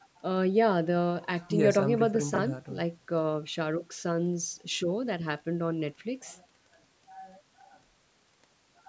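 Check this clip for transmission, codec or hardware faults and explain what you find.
One transmission fault stands out in the speech, a brief stretch of chunks out of order.

From 2.34 to 2.38 s, two 20 ms pieces of audio swap places. One chunk arrived late, by a single chunk, and played after the one meant to follow it. No audio is missing. The order is simply wrong. That creates three hard joins where the waveform breaks. The result is a quick jumbled blip. The call microphone processing, which keeps nothing above 8 kHz, sits under all of this.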